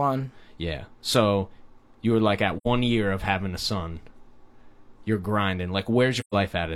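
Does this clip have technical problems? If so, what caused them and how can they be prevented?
Yes: AAC frame loss with muting, soft-edged silent gaps at 2.57–2.67 s and 6.20–6.34 s, fitting two and three lost frames zeroed by the decoder. These show as faded full-band blank columns. Prevent them with forward error correction or retransmission.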